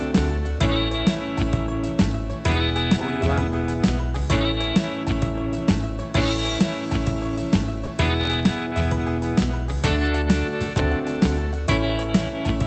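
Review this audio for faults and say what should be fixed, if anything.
Sound dropped by the voice detector at 7.85 s: about 20 ms of the sound briefly gives way to flat background noise, likely because the sender's Opus discontinuous-transmission detector judged that moment to be background, stopped sending, and the receiver filled the gap with comfort noise. Lowering the detector's sensitivity or disabling DTX would prevent it.

Processor overload crackle from 8.21 to 8.49 s: a gritty burst of crackle rides on the sound as around ten audio buffers, each well under a millisecond long, miss their deadlines and are replaced by tiny hard-edged silences. Reducing CPU load or using larger audio buffers would prevent it.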